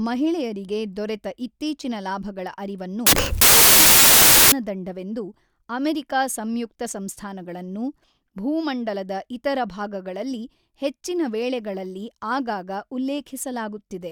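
From 3.07 to 4.52 s the speech collapses into loud, harsh noise with the original faintly buried underneath, running fast and pitched up by a factor of 1.5. This is a wrong sample width fault: 16-bit samples were read as packed 24-bit, splicing mismatched bytes together.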